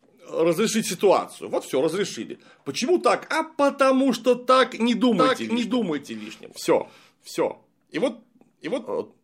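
A doubled audio track begins at 5.18 s, just after "потому что так не", and runs to the end. A second full-band copy of the speech trails about 0.7 s behind, about 5 dB quieter. It enters abruptly and has no decay or room colour. This likely comes from a slower capture path mixed in.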